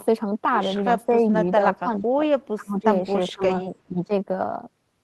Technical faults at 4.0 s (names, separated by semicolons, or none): speech suppressed in double talk